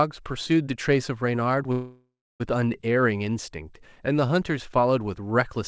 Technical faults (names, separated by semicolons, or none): call audio freeze